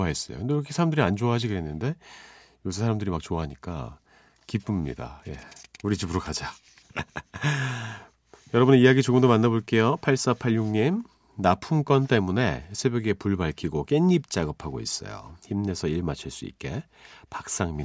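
Nothing technical goes wrong anywhere in this speech recording, so there's no fault to describe.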